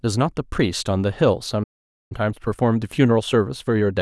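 At 1.63 s the speech cuts out mid-flow and stays silent for about 470 ms, until 2.12 s. This is a playback stall, most likely the player running short of buffered data or its output thread being blocked, so nothing reached the output until it recovered. From 2.12 s to the end, time-compressed catch-up follows: the player shortens its backlog by removing small segments and cross-fading across the joins. The speech runs roughly 1.1 times fast at unchanged pitch.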